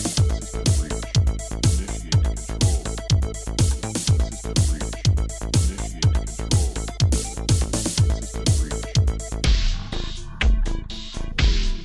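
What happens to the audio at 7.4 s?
Nothing goes wrong at 7.4 s; the audio is intact there.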